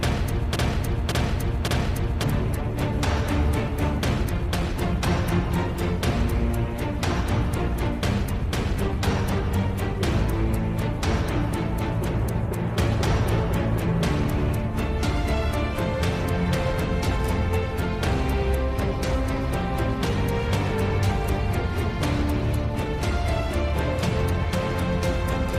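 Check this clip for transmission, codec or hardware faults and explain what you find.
One fault appears at the start. From 0 to 2.24 s, already under way, a broken-record loop repeats an identical 0.56 s fragment three times, likely from a stalled stream resending its last buffer. Unlike echo, nothing decays, and the missing audio is simply lost.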